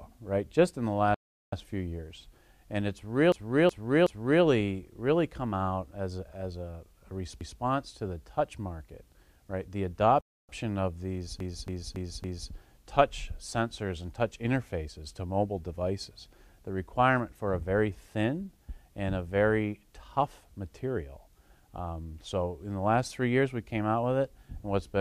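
The audio cuts out abruptly twice, from 1.14 to 1.53 s (380 ms) and from 10.21 to 10.49 s (about 280 ms), then resumes. These are playback stalls: silence in mid-flow, likely because the player's buffer ran dry or its thread was blocked until it caught up. It also stutters three times with repeated frames, where a compressed block is decoded again. From 3.32 to 4.44 s, a 371.5 ms block plays three extra times, which fits a run of four frames and adds 1.11 s. At 7.41 to 7.60 s, a 185.8 ms block plays once more. From 11.40 to 12.52 s, a 278.6 ms block repeats four extra times, adding another 1.11 s.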